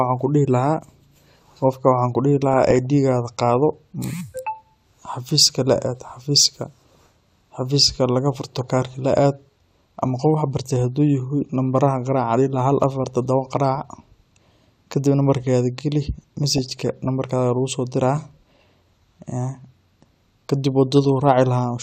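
DAB burbling at 2.53–2.86 s after "qofkaa waxan kuu dihii", 8.33–8.62 s before "kaarka laa aad", 13.75–13.85 s after "afaar todooba", 16.51–17.06 s and 20.92–21.05 s. Bit errors of a fraction of a percent slip past error correction into the MP2 data. Corrupted samples put short blips of noise in single sub-bands and corrupted scale factors make sub-bands jump in level for up to a frame, so noise blips and level jumps sit over the speech.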